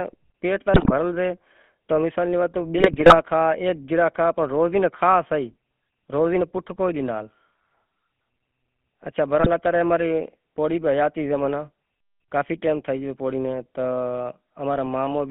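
From the start, the whole clip has that GSM full-rate codec sound: the speech is squeezed into roughly a 150 Hz to 3.4 kHz phone band, and there's a buzzy, gravelly grain running through it. That comes from the codec rebuilding the voice from a vocal-tract model fed with sparse, regularly spaced pulses rather than the real excitation. The damage is plainly audible, and it fits the old 13 kbps full-rate scheme.

Then you get GSM bit errors, the kind you'd hear on a weak radio link, where corrupted filter, pitch or gain values reach the decoder and wreck individual frames. The first burst, from 0.74 to 0.92 s, breaks the voice into a short squawky, gargling stretch. The longest runs from 2.78 to 3.23 s, nearly half a second of popping and garbled level jumps. A last brief glitch hits at 9.40 to 9.48 s, a quick pop or squawk.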